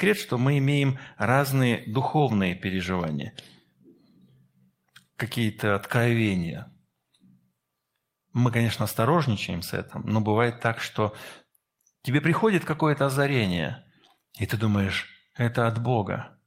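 No technical faults turn up anywhere in the speech, so there is nothing to describe in time order.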